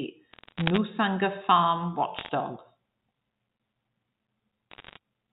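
Bursts of bit errors on a digital phone line crackle over the speech from 0.32 to 0.78 s, 2.19 to 2.30 s and 4.71 to 4.97 s. Under one percent of bits get flipped, and each flip changes a single sample of the mu-law telephone signal, with flips on high bits making a sharp tick.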